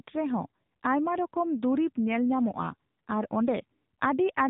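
From the first moment to the end, the speech carries AMR narrowband mobile codec damage, and it's plainly audible. Everything above about 3.8 kHz is gone, which gives that boxed-in phone-line quality. The codec rebuilds the voice from a vocal-tract model driven by a few pulses per short subframe, so at this rate it comes out buzzy and somewhat synthetic, which fits one of the lower AMR-NB modes, around 7.95 kbps.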